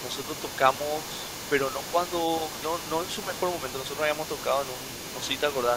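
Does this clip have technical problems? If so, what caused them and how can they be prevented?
Yes. The other side's voice leaks through for the whole clip, 0.00 to 5.76 s. It is a faint second voice well below the talker, likely left behind by an echo canceller that could not fully remove loudspeaker playback from the microphone. Unlike crosstalk, it tracks the far end's speech. A headset or a better-converged echo canceller would prevent it.

Speech is suppressed in double talk at 0.12 to 0.19 s and 5.23 to 5.30 s. The talker's voice dips sharply for brief moments, likely because the canceller turned everything down while both sides spoke. The dips happen only during overlapping speech, which tells them apart from dropouts. A canceller with proper double-talk detection would prevent them.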